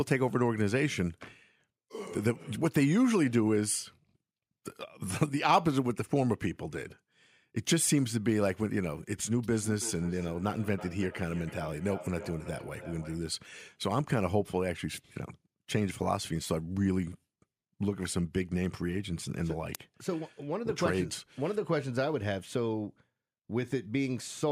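Feedback echo between two devices runs from 9.52 to 13.22 s in this speech recording: the speech returns roughly every third of a second at about -16 dB, as one device replays another's microphone feed within earshot, and neither echo canceller removes sound it didn't play.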